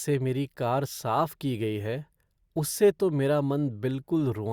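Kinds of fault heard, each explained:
No faults can be heard anywhere in this recording.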